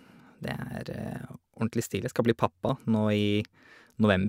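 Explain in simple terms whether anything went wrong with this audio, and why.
At 2.69 s there's a tiny jump in the speech, with no gap at all. That's most likely a dropped buffer (overrun): the recording software didn't grab a few milliseconds of sound in time, so that sliver vanished and the edges got stitched together.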